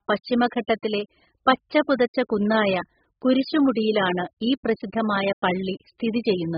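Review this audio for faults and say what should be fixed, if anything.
AAC compression runs throughout: the speech sounds dull and smeared, with nothing above 5.1 kHz and a warbling, fizzy texture on sibilants. The likely cause is heavy AAC-LC coding at a rate fitting about 8 kbps, where the encoder drops the top band and quantises the rest coarsely. To prevent it, re-export from the original source at a much higher bitrate or in a lossless format.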